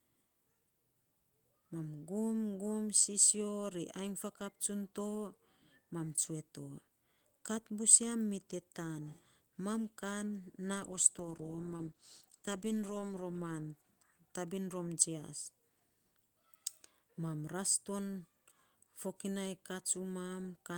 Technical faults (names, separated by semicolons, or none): call bitrate drop